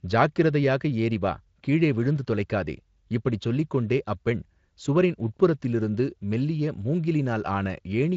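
No faults to report: the speech comes through a Speex path at what sounds like a high quality setting, with only the light coding texture that setting leaves and no events anywhere in the clip.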